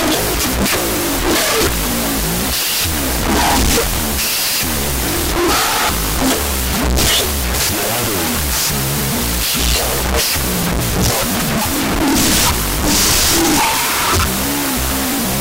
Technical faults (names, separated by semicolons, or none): wrong sample width